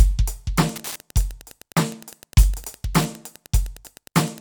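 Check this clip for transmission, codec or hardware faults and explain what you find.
There is one hardware fault, Wi-Fi interference, running from 0.68 s to the end of the music. A nearby Wi-Fi radio's beacon, every 102.4 ms, is rectified by the audio circuit, producing a steady ticking about ten times a second, roughly 25 dB below the music.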